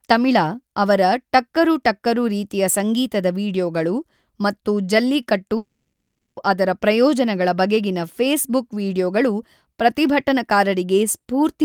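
Long network dropout, the likely cause at 5.57 to 6.39 s: speech dissolves into a fading buzz, then 0.23 s of silence, and resumes with 0.8 s lost.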